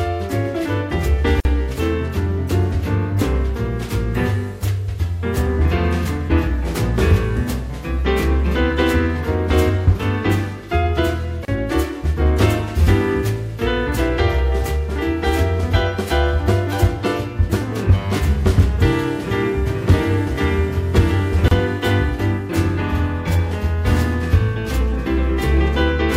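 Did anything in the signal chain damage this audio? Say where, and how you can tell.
Yes. The sound drops out briefly at 1.40 s (48 ms), 11.45 s and 21.48 s (31 ms each), ten seconds apart, with smeared edges. This is a gap at a join of encoded pieces: codec segments were joined untrimmed, keeping encoder delay and end padding as silence.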